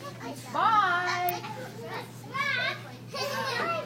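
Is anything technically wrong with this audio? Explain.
Yes, there are two faults.

An electrical switching spike occurs at 1.29 s: a sharp snap lasting about 5 ms, laid over the sound. It is likely caused by a nearby switch, motor or static discharge whose arc was picked up by the audio line.

Damaged data in a compressed stream follows from 1.40 to 1.45 s. Corrupted bytes in the encoded frames there make the decoder misread them and lose sync while it hunts for the next valid frame header, producing a brief glitch of about 50 ms.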